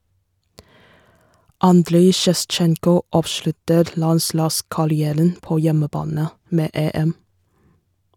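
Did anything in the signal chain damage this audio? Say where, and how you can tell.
No, none of the stages in the chain left any audible damage in this speech recording. There is nothing at any point that would point back to the wiring, conversion, processing, transmission, storage or playback.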